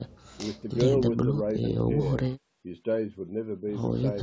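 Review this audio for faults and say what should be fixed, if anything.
Nothing in this speech recording needs fixing. It carries the sound of call microphone processing, with the lowest bass trimmed and nothing above 8 kHz, which is normal for that path.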